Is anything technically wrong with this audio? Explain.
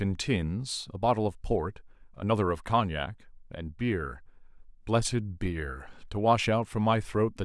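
No, nothing is technically wrong with this speech recording. No faults can be heard anywhere in it.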